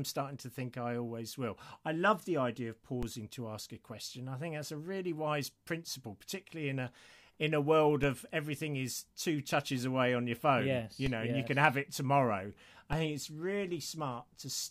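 Four DC steps land in this speech, at 3.03 s (after "love the idea of"), 8.03 s (after "a in a world"), 11.06 s, and 12.93 s (after "can have it tomorrow"). Each time the waveform's zero line jumps by about -26 to -25 dBFS, then bleeds away as a 20 Hz high-pass pulls it back to centre. You hear a dull low thump or click at each jump while the talking carries straight on underneath.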